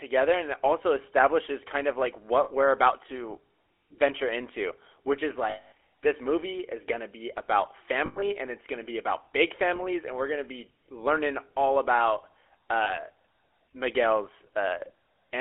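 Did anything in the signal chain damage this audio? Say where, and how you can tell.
Yes, at the codec stage. The whole clip has the buzzy, gravelly grain of GSM full-rate coding, and it's plainly audible. The band sits at roughly 300 Hz to 3.4 kHz, which fits a 13 kbps GSM full-rate codec. That codec rebuilds the voice from a vocal-tract model fed by evenly spaced pulses, so fine detail is lost.

There are also lost GSM frames, at 2.44 s (about 60 ms), 5.5 to 5.72 s (about 220 ms), 8.06 to 8.23 s (gappy, longest stretch around 100 ms), 9.76 s and 12.84 s (each about 20 ms). You hear a rough, metallic ring hanging on. That's concealment repeating the last good frame.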